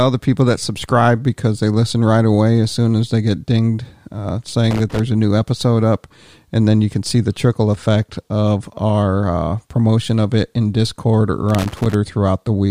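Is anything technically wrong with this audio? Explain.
Yes, there's loose connector crackle in two spots, from 4.71 to 5.00 s and again from 11.49 to 11.94 s. It sounds like a worn or dirty contact somewhere in the speech chain that keeps connecting and disconnecting when it's nudged. That rapid on-off chops the signal, and any DC on the line turns each break into a pop, so you get those short, uneven bursts of scratchy crackle.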